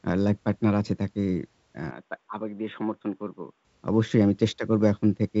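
An input switched to a poorer device, from 1.91 s to 3.65 s, is the likely cause of the change heard here. The speech abruptly loses everything above 3.8 kHz and drops roughly 10 dB in level, sounding dull and boxy, with a new background noise floor sitting well below it. There is no gap at the switch. At 3.65 s the fuller sound returns, with the G.722 coding's wider band reaching about 7.8 kHz.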